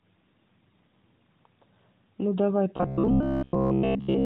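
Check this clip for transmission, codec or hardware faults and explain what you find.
One fault stands out in the speech, in its final stretch. From 2.77 s to 4.25 s there is robotic sound from repeated short buffers: the voice becomes a rigid, metallic buzz at 66.8 Hz that still loosely tracks the speech. The likely cause is audio arriving too slowly, so the playback side keeps re-looping a fragment of about 15 ms, roughly 70% of the time, while the real signal is skipped. A spectrogram would show evenly spaced, unnaturally flat horizontal harmonics at 66.8 Hz intervals, all sitting below the narrowband mobile codec's ceiling at 4 kHz. In the waveform, identical short cycles repeat back to back.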